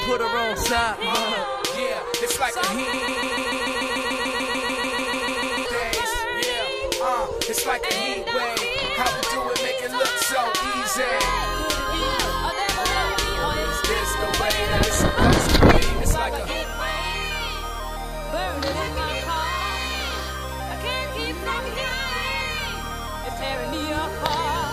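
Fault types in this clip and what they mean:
broken-record loop: from 2.93 s to 5.66 s, a 147 ms fragment plays back to back 19 times, identical on every pass. The likely cause is a stalled player, encoder or stream resending the last piece it held, so the audio meant for that span is lost.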